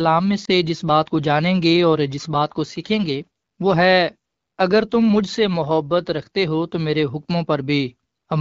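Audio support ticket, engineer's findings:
Lost AMR speech frame, 0.45 to 0.50 s. A single frame, about 20 ms, failed its checksum after a radio error. The AMR-WB decoder concealed it by repeating the last good pitch and vocal tract parameters at reduced gain. Result: a brief dip in the speech, then immediate recovery with a momentary weak onset. The underlying wideband coding, with light codec damage consistent with a mid-rate mode near 12.65 kbit/s, keeps speech clear on either side of the gap.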